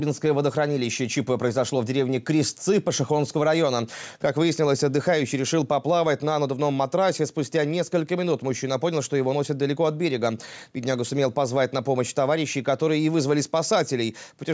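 Throughout, the input gain was likely set too high, so a fast limiter clamps every loud sound. The result is gain pumping: the level swings by about 5 dB.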